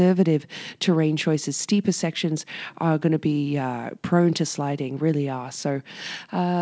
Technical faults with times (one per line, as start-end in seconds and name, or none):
none